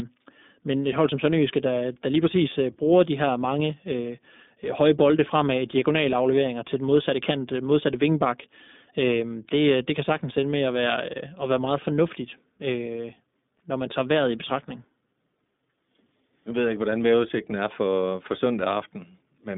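Speech heard through the iLBC codec for its full length. The band is confined to roughly 200 Hz to 3.6 kHz, with nothing above 3.7 kHz. The narrowband coding leaves a plainly audible rough, synthetic edge, because each frame's excitation is coded without reference to the previous one. The texture fits 20 ms frames at the 15.2 kbps mode.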